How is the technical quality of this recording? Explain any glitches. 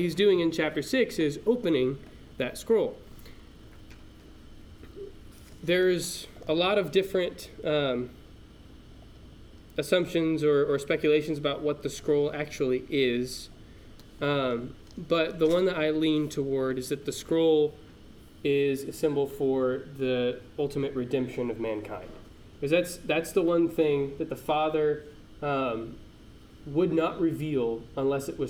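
No technical glitches can be heard in this recording. The sound stays steady and continuous throughout, with nothing breaking into it.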